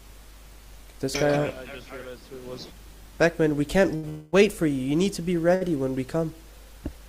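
At 3.95 to 4.05 s and again at 5.55 to 5.63 s, short stalls from a late packet hold the sound for 76 ms and 64 ms. Nothing is lost. From 4.09 to 4.35 s, a call audio freeze stretches the sound into a fading buzz or hiss for 235 ms, never reaching silence. This likely comes from delayed packets emptying the jitter buffer.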